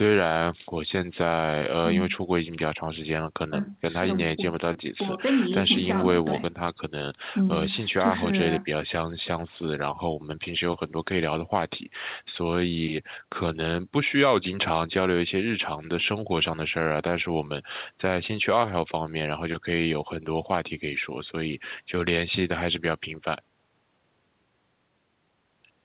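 No technical faults can be heard anywhere in the speech. It arrives over a WebRTC call path, and the narrow telephone-band sound, with nothing above 4 kHz, fits the G.711 mu-law codec.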